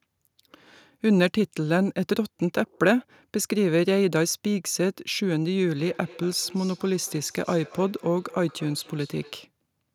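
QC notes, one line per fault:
5.82–9.47 s: feedback echo between two devices; the speech returns about every fifth of a second, peaking about 23 dB down, as a nearby device's playback re-enters the microphone.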